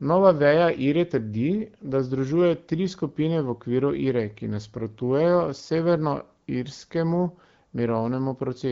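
No technical faults can be heard in this recording.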